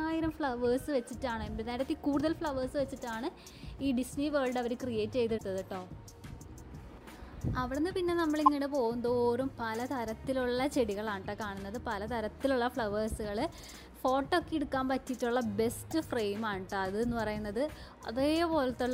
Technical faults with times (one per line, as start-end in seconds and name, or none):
5.34-5.41 damaged data in a compressed stream
8.46-8.48 damaged data in a compressed stream
15.87-15.92 damaged data in a compressed stream